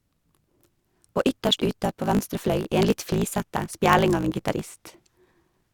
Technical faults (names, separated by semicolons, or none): block size mismatch (truncated)